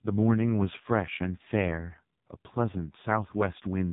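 Throughout, the speech has passed through the AMR narrowband mobile codec at a very low bitrate, which fits AMR-NB near 5.9 kbps. Nothing survives above about 3.8 kHz, so the speech is dull and boxy, and the sparse pulse model makes it heavily buzzy and synthetic.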